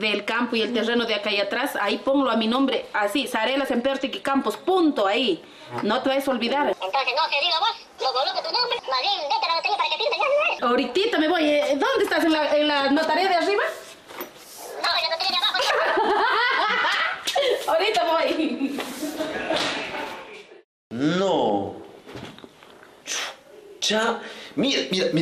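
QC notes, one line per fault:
Throughout: MP2 compression. The audio was likely encoded with MPEG Layer II at a starved bitrate, consistent with roughly 80 kbps, so the encoder cannot fund all 32 sub-bands. Upper bands drop out and switch back in from moment to moment, while the bands that survive are quantised coarsely. The result is plainly audible: a dulled top end, a gurgling, granular grain riding on the sound, and a flickering brightness as the high bands come and go.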